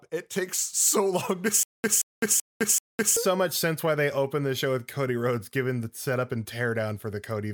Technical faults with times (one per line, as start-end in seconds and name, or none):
1.63-3.17 stutter with silent gaps